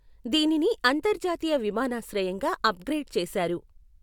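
No faults detected anywhere in the speech recording.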